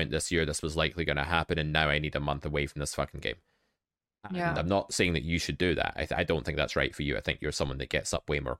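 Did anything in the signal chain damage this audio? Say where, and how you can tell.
No, nothing along the chain seems to have left a mark on this speech, so there's no stage to point at here.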